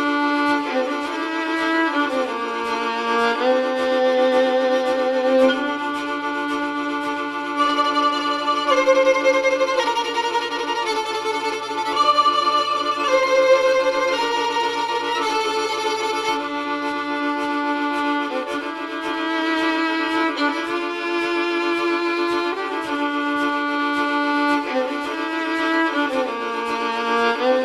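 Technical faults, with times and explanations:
No technical faults can be heard anywhere in the clip. Nothing in the audio calls for a time stamp or an explanation.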